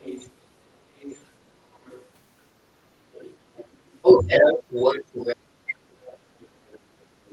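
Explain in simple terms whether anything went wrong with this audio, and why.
The other side's voice leaking through is heard from the start to 2.1 s, and again from 3.12 s to the end, where it is louder than the talker. The likely cause is the loudspeaker echo not being fully removed.

Speech is suppressed in double talk at 0.82 to 0.88 s, 1.51 to 1.6 s, 3.61 to 4.74 s and 5.35 to 5.7 s. The talker briefly dips, almost vanishing at 1.51 s. This likely happens because both sides talk at once.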